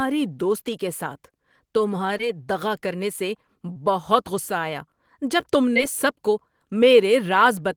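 Short concealed packet loss occurs three times: at 2.17–2.21 s, just before "دغا کرنے سے بہت"; at 3.73–3.77 s, between "دغا کرنے سے" and "بہت غصہ آیا"; and at 5.73–5.77 s, just before "سب کو". Each time about 20 ms of speech arrived too late, and the decoder bridged the gap by extending the preceding sound before blending back. The result is a brief smear or wobble rather than the hard silent gap of an unconcealed dropout.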